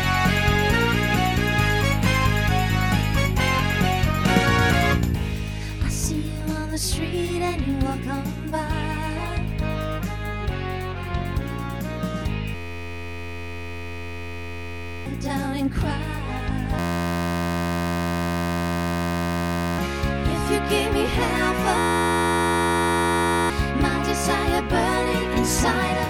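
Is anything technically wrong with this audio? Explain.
Yes. Three stretches collapse into a flat, steady buzz pitched at about 86 Hz, from 12.55 to 15.06 s, 16.79 to 19.78 s and 21.78 to 23.50 s. This is a system hang loop. The playback system froze while the hardware kept replaying one 11.61 ms slice of its ring buffer, which fits a 512-sample buffer. It repeats 216, 258 and 148 times, and roughly three, three and one and a half seconds of audio are lost.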